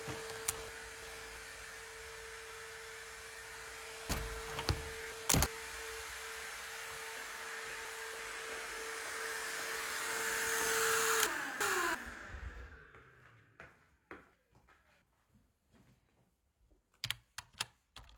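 Chunks out of order at 0.68–1.37 s, 4.10–5.46 s, 7.17–8.19 s, 11.26–11.95 s and 14.34–15.02 s. A 341 ms block plays late, after blocks meant to follow it. Each spot sounds jumbled.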